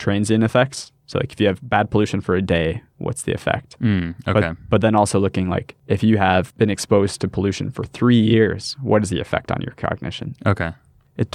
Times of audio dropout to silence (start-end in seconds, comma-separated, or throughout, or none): none